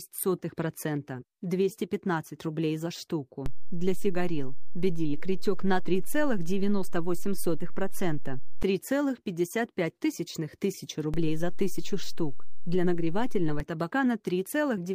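The waveform's zero line jumps by a DC step of about -21 dBFS at 3.46 s, holding until 8.63 s, then by about -22 dBFS from 11.14 s to 13.6 s. Each shift in and back out lands as a low thump, while the sound continues unchanged.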